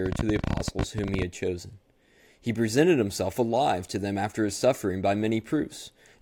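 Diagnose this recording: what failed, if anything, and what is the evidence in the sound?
A rapid, uneven ticking runs over the speech from 0.06 s to 1.23 s: a train of clicks, about 20 in all at roughly 19.8 per second, each with much the same sharp shape and peaking around 10 dB above the speech, audible in the gaps as well. The irregular spacing and consistent click shape point to the analogue wiring or interface stage, likely electrical interference from nearby equipment or a struggling connection injecting pulses into the signal.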